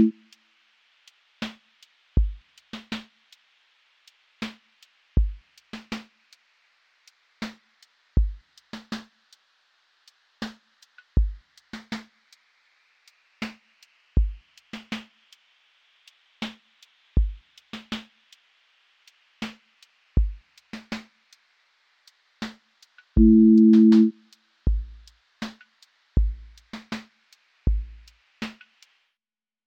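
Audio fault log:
No faults detected anywhere in the clip.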